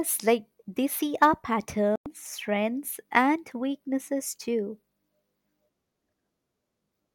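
At 1.96 s, right after "like they see our", the speech cuts to silence for about 100 ms. It resumes at 2.06 s with "strengths and weaknesses too". The missing stretch is skipped rather than delayed, as if playback ran on. This is likely a Bluetooth dropout, where a few audio packets reached the headphones too late and were discarded.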